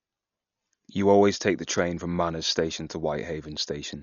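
All the way through, the speech sounds dull and heavily coded, with nothing above 6.9 kHz and rough, fluttery noise, likely Dolby Digital compression at a starved bitrate around 48 kbps.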